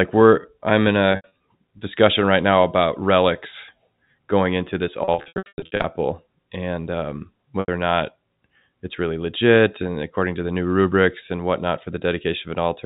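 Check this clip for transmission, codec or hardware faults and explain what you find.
Three bursts of packet loss with pitch repetition interrupt the speech, carried over G.711 telephone coding.

At 1.12 to 1.31 s, 160 ms is lost across 280 ms, with the longest gap 80 ms. The receiver loops the last pitch period, giving brief buzzy holds.

At 5.04 to 5.84 s, 520 ms is lost across 800 ms, with the longest gap 100 ms. Repeated patching makes a stuttering, buzzy stretch with short fades.

At 7.60 to 7.68 s, a single 80 ms gap gives one short held buzz before the speech cross-fades back.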